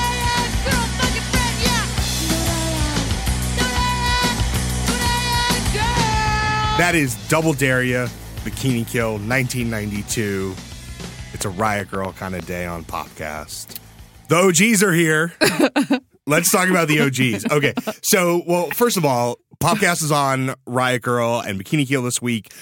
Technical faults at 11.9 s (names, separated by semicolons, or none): train of clicks